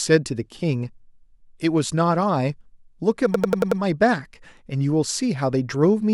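At 3.34 s the speech freezes into a system hang loop that lasts until 3.81 s. The computer or its audio driver stalled, but the sound hardware kept replaying its ring buffer. One slice of about 93 ms repeats five times, which fits a 4096-sample buffer. At 10.8 repeats per second, it sounds like a rapid machine-gun stutter, not a steady buzz. Little or no audio is lost once playback resumes.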